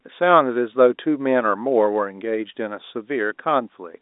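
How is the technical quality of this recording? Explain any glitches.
No glitches to report: the speech comes over a telephone-grade G.711 path, band-limited to roughly 250 Hz–3.7 kHz with nothing above about 3.8 kHz, as expected of 64 kbps A-law coding.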